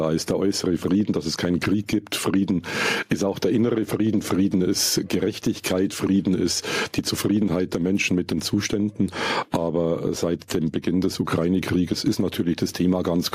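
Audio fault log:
Throughout: gain pumping. The gain is pulled down on each loud sound, with the overall level swinging by roughly 10 dB, so loud and quiet passages sit unnaturally close together and the sound feels squashed. This likely comes from input gain set far too high with a fast limiter clamping down on peaks. Unlike a noise gate, gain pumping rides the level up and down rather than cutting to silence.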